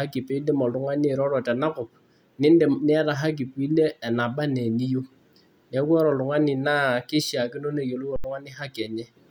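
Underrun with held sample at 8.16 s, after "keishaakino neyiolou": the buffer ran dry, freezing the waveform flat for 80 ms, then resuming as about 70 ms went missing.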